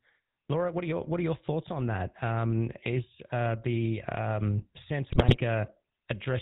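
From start to finish the speech carries the GSM full-rate codec: pulse-driven vocal-tract coding, consistent with 13 kbps, cuts everything above 4 kHz and leaves a buzzy, gravelly roughness rather than plain band-limiting's muffling. From 5.1 to 5.44 s, GSM bit errors corrupt filter, pitch and gain values, causing squawks, pops and gargling rather than the silent gaps of dropped frames.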